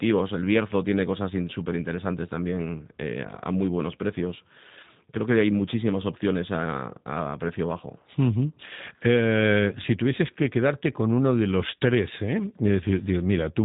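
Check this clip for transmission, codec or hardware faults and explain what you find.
One codec fault runs through the whole clip. G.729 codec, throughout: the speech is rebuilt from a vocal tract filter, pitch predictor and sparse pulses, which fits an 8 kbit/s stream, leaving it plainly rough and synthetic, with nothing above 3.8 kHz.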